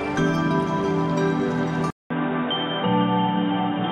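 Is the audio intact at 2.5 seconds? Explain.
No. From 1.90 s to the end, the sound is band-limited with nothing above 3.8 kHz, so it turns dull and boxy, and a different background noise sits roughly 30 dB under the signal. A 200 ms gap of silence marks the transition, while the overall level stays about the same. This is the signature of an input switched to a poorer device, likely a change to another microphone or a headset's call profile with a narrower passband.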